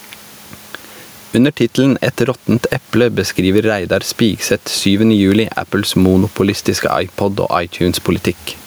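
Gain pumping runs through the whole speech clip. The level swings by around 10 dB, likely from excessive gain feeding a fast limiter.

At 5.32 s an electrical switching spike cuts in. It is a sharp snap laid over the speech. A nearby switch or static discharge is the likely source.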